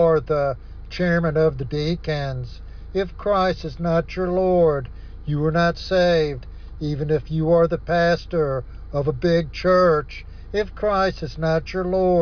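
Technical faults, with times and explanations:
No technical faults can be heard anywhere in this audio.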